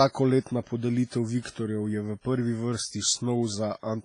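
A low-bitrate transform codec, likely WMA compression, has handled the speech throughout, with damage that points to a rate near 24 kbps. Its long blocks smear quantisation noise into a ringing, washy hiss that breathes with the signal, and nothing remains above 10.4 kHz.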